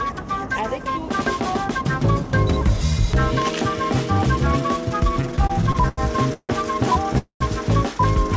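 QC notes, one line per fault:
5.22 to 6.51 s, repeated stalls (stutter): the audio keeps catching and dragging, with eleven short holes patched over, the longest about 155 ms, adding up to roughly 29% of that stretch. Packets were turning up late, so the jitter buffer kept running dry and the receiver stretched the last sound each time. Nothing's actually lost, it just limps along.
7.18 to 7.42 s, call audio freeze: the sound hangs for about 220 ms, a held buzz that fades out and then goes fully silent for around 120 ms before picking up right where it left off. Likely packets held up in transit emptying the jitter buffer, so a gap got inserted rather than anything being dropped. The audio is band-limited to 8 kHz, which fits a G.722 call path at 64 kbps.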